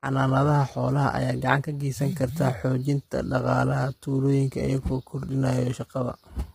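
Throughout the speech, the voice sounds rough and grainy, with noise filling the gaps between pitch harmonics and nothing above 15.6 kHz. This points to heavy low-delay AAC compression, likely AAC-ELD, whose short frames blur harmonics, at a rate consistent with about 24 kbps.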